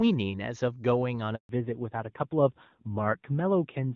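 At 1.35 s the speech cuts out in a handover gap lasting 140 ms, until 1.49 s. The call was being passed from one network link to another, and no speech frames were delivered while the switch completed. The sound collapses to silence within a few tens of milliseconds instead of trailing off naturally. The audio that should have filled that interval is simply missing, leaving a clean hole in the speech.

From 1.49 s to the end, the audio shows a fallback to narrowband. Before the gap the speech carries the full wideband top end of AMR-WB (HD Voice), with faint or no codec damage, which fits its highest rate. After the handover nothing remains above 4 kHz. The sibilants lose their crispness and the speech turns duller and rougher, consistent with AMR narrowband at around 7.4 kbit/s.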